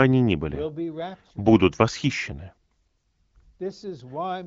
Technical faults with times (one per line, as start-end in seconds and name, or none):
none